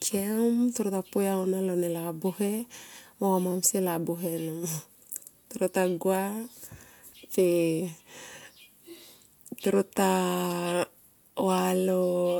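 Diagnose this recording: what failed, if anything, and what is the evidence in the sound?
Brief clicky buzzes at 3.52 s and 10.51 s: a repeated buffer at the driver stage, one 5.8 ms block replayed twice more, which fits a 256-sample buffer.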